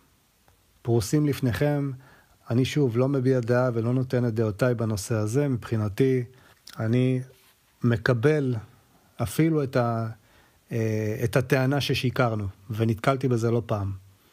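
Nothing in the signal stands out as a technical fault at any point.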